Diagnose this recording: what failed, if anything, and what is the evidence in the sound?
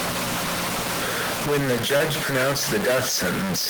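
A stuck bit is the likely cause of the grainy noise or buzzy distortion that runs through the whole speech clip. It sits on the converter or the digital data line feeding it. The noise or distortion rides on every sound. The pauses between phrases are filled with a steady noise floor instead of going quiet. That fits one data bit held at a fixed value, so about half the samples are offset by that bit's weight. Near zero, the error also flips with the sign of small values.

A short concealed packet loss falls between 1.97 and 2.02 s. It is a network-stage fault. It is heard as a brief smear in the speech, lasting a few hundredths of a second, before the sound settles back. About 20 ms of audio never arrived in time. The receiver synthesised about 21 ms to cover the gap by extending the preceding sound, then cross-faded back into the real stream. That blend is what produces the smeared transition.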